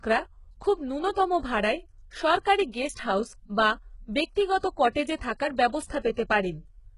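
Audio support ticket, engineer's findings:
Likely HE-AAC compression throughout, fits roughly 12 kbps. Treble rebuilt by band replication, empty above 11.1 kHz; heavy damage, s sounds gritty, metallic.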